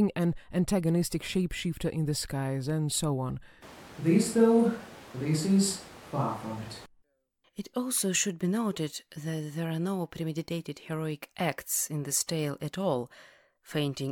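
A switch to a distant microphone runs from 3.63 to 6.86 s, after "skies and so on". The speech turns suddenly roomy, hollow and thin in the bass, with room noise about 25 dB below it at an unchanged level, likely because the close microphone's feed dropped out.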